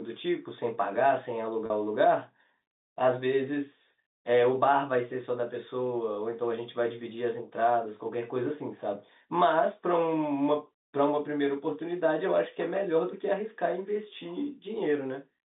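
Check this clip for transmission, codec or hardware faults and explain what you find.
One transmission fault stands out in this telephone-band speech clip, heard through G.711 coding. Packet loss with pitch repetition occurs at 1.66 to 1.70 s: about 40 ms went missing, consistent with two lost packets. The receiver filled the gap by looping the last pitch period, producing a brief held, buzzy sound.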